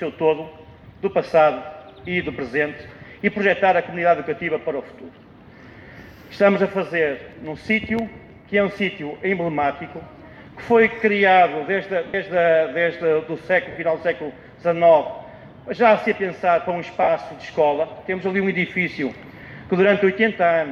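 At 12.07–12.14 s, 13.71–13.76 s and 17.03–17.08 s the stream drops out in short bursts of lost LE Audio frames, 70 ms, then 50 ms twice, which fits runs of seven and five 10 ms LC3 frames. The decoder fills each gap by repeating the last spectrum with scrambled phase, so tones blur into a brief noisy smear that softens toward the end. A spectrogram shows smeared, flattened bands there, and the waveform shows a decaying noise-like patch.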